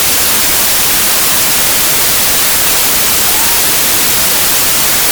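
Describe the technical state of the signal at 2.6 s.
A wrong sample width runs through the whole clip, so 2.6 s is affected like every other point. Packed 24-bit samples are being read as 32-bit words. Each value mixes bytes from neighbouring samples. The result is loud noise with the original buried inside it, playing about 1.33 times too fast and too high.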